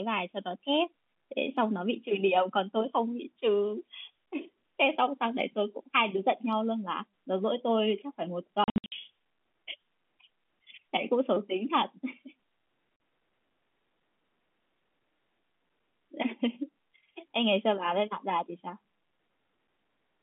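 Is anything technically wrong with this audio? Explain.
Yes. Between 8.64 and 8.92 s, the speech breaks into a stutter of short dead gaps with hard edges. About 220 ms of sound vanishes across that 280 ms stretch, the longest hole lasting 60 ms. A single 40 ms hole follows at 12.96 s. This is packet loss filled with silence: the receiver inserted zeros for missing packets, and the gap sizes fit 20 ms packets. The narrowband G.711 telephone sound around these holes is intact.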